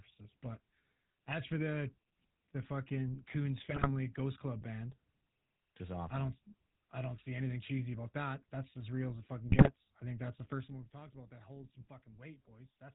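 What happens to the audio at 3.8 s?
At 3.8 s the speech breaks up with GSM bit errors, from 3.70 to 3.91 s. Over those two tenths of a second the sound turns into squawks, pops and a gargling smear. The damage fits a weak radio link, with roughly a few bits in every hundred arriving flipped. Corrupted filter, pitch and gain values reach the decoder. The spectrum bends and the level jumps from frame to frame across several consecutive frames.

Under this burst, and through the whole clip, runs the GSM full-rate codec. Its damage is plainly audible as a buzzy, gravelly roughness. The codec rebuilds the voice from a vocal-tract model excited by sparse, regularly spaced pulses. Only a third of the excitation samples survive. Nothing above 4 kHz gets through, so the sound is dull as well as rough. This character points to the original 13 kbps full-rate coder.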